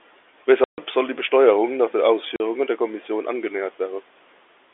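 At 0.64 to 0.78 s, just before "soll die", packet loss filled with silence cuts a 140 ms hole, which fits seven 20 ms packets. Another 40 ms gap follows "nach den" at 2.36 s. Both gaps have hard edges, within telephone-band G.711 audio.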